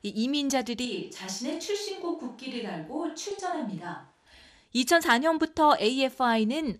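MP2 compression runs through the whole speech clip, likely from MPEG Layer II coding at a rate that sounds like about 80 kbps. Starved of bits, the upper sub-bands drop out and flicker while the remaining ones are coarsely quantised, so the sound is dull, with a plainly audible gurgling graininess.

A switch to a distant microphone comes at 0.86 s and lasts until 4.26 s, likely because the close microphone's feed was lost and a farther one took over. The speech abruptly turns roomy and hollow, loses bass, drops a few decibels, and sits over room noise roughly 35 dB below it.

DAB burbling strikes from 3.31 to 3.39 s, inside the distant-microphone stretch. A small fraction of a percent of bit errors slipped past error correction into the MP2 data, corrupting what sounds like four frames, so individual sub-bands get brief blips of noise.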